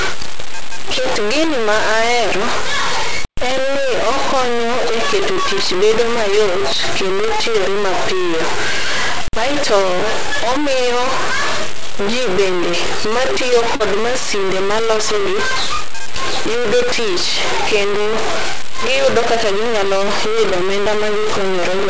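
Speech runs through the whole clip with a harsh, grainy distortion roughly as loud as the speech itself, quiet passages crumbling into sputter and dropouts. This is likely low bit depth without dither: truncation to about 3 bits leaves an error that tracks the waveform. Between 13.76 and 13.83 s, after "ji bende matiyo" and before "masinde malosogi", a brief smear replaces the sound: short concealed packet loss, where about 40 ms of audio went missing and was filled by extending the preceding sound before blending back. The call path's G.722 coding leaves nothing above 8 kHz.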